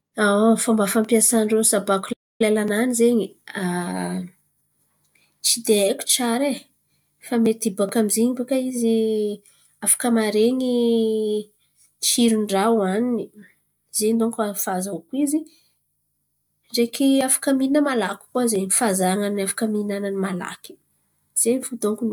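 A speech clip with a playback stall from 2.12 to 2.41 s: the sound cuts off mid-flow into about 0.27 s of silence, likely from the player running out of data or its thread being blocked. The waveform drops flat, and the spectrogram shows a blank vertical gap across all frequencies.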